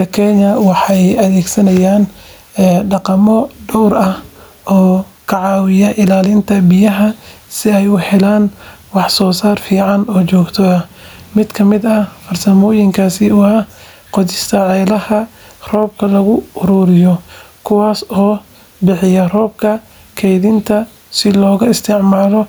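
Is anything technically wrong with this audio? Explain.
Yes. Gain pumping runs through the whole clip. The room noise sits about 44 dB below the speech, and the gain swings by roughly 10 dB. The likely cause is input gain set far too high, with a fast limiter pulling it down on each peak. That squashes loud and soft parts together. A noise gate would push the gaps toward silence instead.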